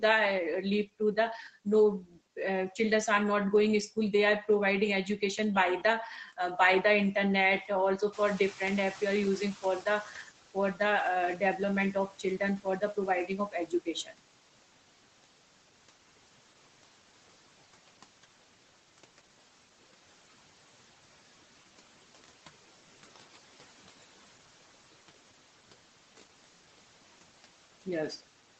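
At 2.0 to 2.17 s, speech cut by the noise suppressor swallows roughly 150 ms of speech, dropping it about 11 dB; the waveform visibly dips.

From 8.12 s, the noise suppressor catching up lets the room noise's roughly 13 dB rise through, and it fades about 11 dB over 2.18 s; the spectrogram's noise floor brightens, then darkens by 10.3 s.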